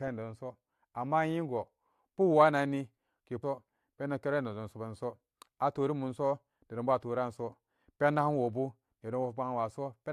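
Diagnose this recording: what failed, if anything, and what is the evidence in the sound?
At 3.42 s the speech jumps abruptly ahead with a small blip, landing on "pendomlara nedom". On the waveform there is a hard discontinuity, and on the spectrogram a thin vertical click line where the formant tracks break. The likely cause is a stream segment skipped at the network or playback stage: one segment failed to load, and the player spliced in the next, dropping that stretch of programme.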